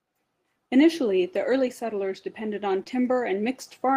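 At about 2.83 to 2.88 s, just after "early settlers depended on", the speech briefly smears and wobbles, losing its crispness for a moment before it blends back. This is short concealed packet loss: roughly 20 ms of the call arrived too late for the decoder, so the receiver stretched the preceding sound across the gap for about 22 ms, then faded back into the real signal, leaving that brief blurred patch.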